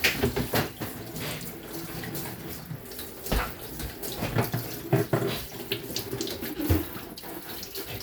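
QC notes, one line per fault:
Nothing to flag here; the audio came through without any technical faults worth noting.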